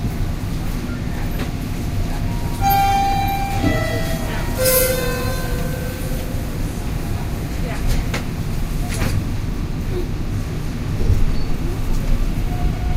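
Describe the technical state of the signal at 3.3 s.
At 3.3 s the audio is intact, with no dropout, clipping, distortion or other technical fault.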